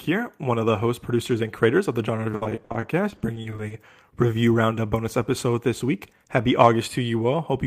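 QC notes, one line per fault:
2.31–3.72 s, repeated packet loss (robotic sound): Many short holes follow each other across this stretch, the longest about 60 ms. Each hole is patched by stretching the last sound forward, about 410 ms in all, which covers some 29% of the span. Another 260 ms is simply missing. The missing pieces make it choppy.
5.42–5.83 s, jitter buffer speed-up: Here the speech hurries at about 110% of normal speed. The pitch stays the same. The receiver was holding more audio than it wanted, probably after delayed packets arrived in a burst. To shed that delay it cut out tiny slices, each one or a few pitch periods long. Roughly 50 ms went in total. Removing whole periods keeps the pitch steady while shortening time.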